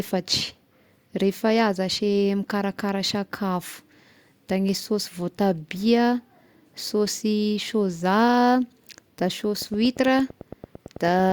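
Something in the chain, likely electrical interference from nearby equipment or a faulty connection or power supply, injects a repeating pulse into this speech recording near its end. From 9.62 s to 11.31 s a train of clicks runs at a steady 8.9 per second, about fifteen near-identical ticks in all, each peaking roughly as loud as the speech itself. They cut through both the talking and the gaps between phrases.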